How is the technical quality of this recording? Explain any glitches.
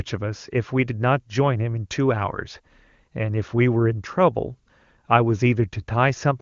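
No glitches are audible anywhere in this recording.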